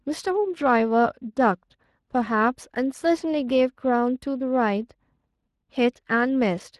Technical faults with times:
0.00-6.80 Speex codec

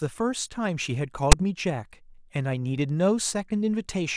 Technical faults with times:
1.32 file tags played as audio

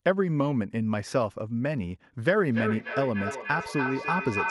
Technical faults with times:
2.49-4.50 feedback echo between two devices

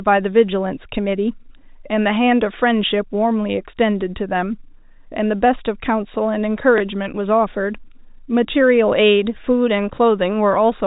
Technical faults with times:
6.78 packet loss with last packet repeated

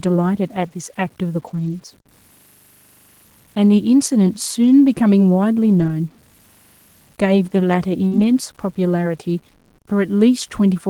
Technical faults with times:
0.00-10.90 low bit depth without dither
1.47-1.74 lost packet rebuilt from error correction
1.51-1.55 short concealed packet loss
4.64-4.74 lost packet rebuilt from error correction
5.80-5.90 lost packet rebuilt from error correction
8.08-8.13 short concealed packet loss
8.12-8.26 lost packet rebuilt from error correction

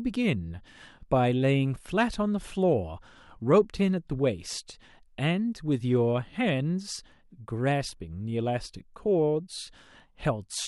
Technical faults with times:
none

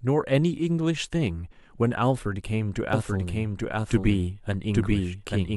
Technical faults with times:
2.93-5.56 doubled audio track

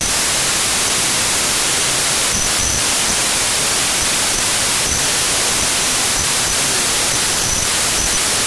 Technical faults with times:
0.00-8.46 wrong sample width

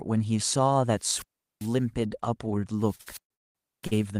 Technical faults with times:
0.92-1.86 wireless microphone squelch dropout
2.78-4.10 wireless microphone squelch dropout
2.95-3.32 short stall from a late packet
3.34-3.57 call audio freeze
3.87-3.93 short stall from a late packet

